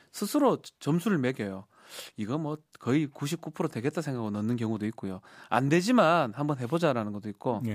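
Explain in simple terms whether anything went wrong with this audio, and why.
Nothing went wrong with it.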